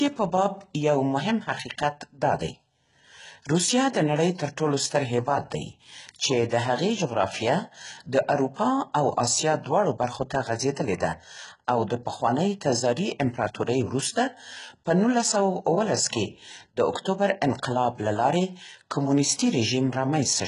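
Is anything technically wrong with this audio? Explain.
Yes. HE-AAC compression, running through the whole clip, is the likely cause of what can be heard. Only the lower spectrum is coded properly. The upper band is rebuilt by copying lower bands upward and shaping them with a coarse envelope, and nothing is present above about 11.1 kHz. The damage is heavy, which fits a bitrate around 12 kbps. The synthetic treble doesn't line up harmonically with the speech below it, so sibilants come out gritty, metallic and lispy.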